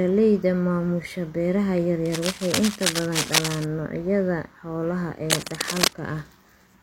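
A speech clip with cable scratch noise twice: from 2.05 to 3.64 s, after "maamusha beeraha yar", a rustling scratch sits just under the voice, and from 5.30 to 5.94 s, after "noocyada xoolaha", it's roughly as loud as the speech. Likely a worn cable or connector being moved.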